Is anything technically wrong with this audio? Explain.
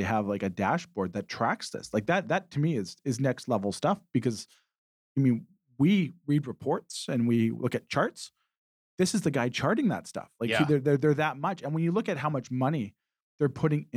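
No, nothing here sounds technically wrong, so there's nothing to flag in this speech recording.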